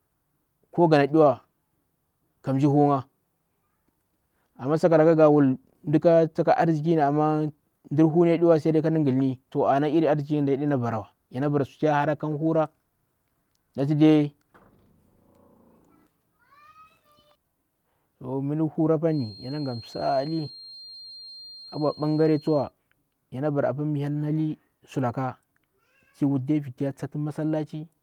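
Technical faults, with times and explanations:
19.05 to 22.73 s, feedback whistle: a thin, steady tone at 4.2 kHz sits behind the speech, roughly 25 dB down and swelling and fading slowly in level. That's likely a loudspeaker-to-mic loop hovering right at the edge of feedback, ringing on one frequency without running away.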